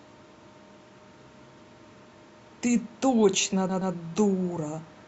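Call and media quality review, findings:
Repeated frames, speech, 3.69–3.93 s: stutter, same 120 ms block played twice more, 240 ms added. Probable component: packetiser or writer resending a compressed run; block fits roughly six 20 ms frames. Distinct from packet-loss concealment: content is replayed intact, not smeared or faded, and the timeline longer. Distinct from a jitter-buffer underrun: no gap or silence before the repeat.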